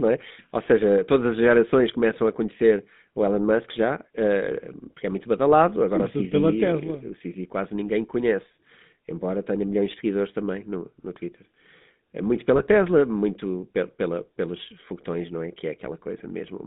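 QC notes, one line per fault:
throughout GSM full-rate codec: buzzy, gravelly roughness over the speech, band held to about 200 Hz–3.7 kHz, which fits a 13 kbps full-rate coder using pulse excitation.
12.56–12.65 s GSM bit errors: a brief squawking, gargled burst just before "muito pe pela pelos", as corrupted filter, pitch or gain values distort several frames.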